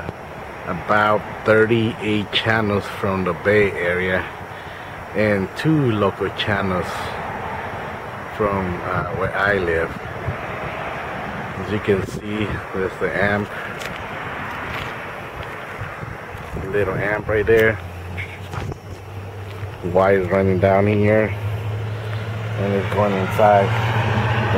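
Nothing here calls for comment, since no technical faults turn up anywhere in the recording.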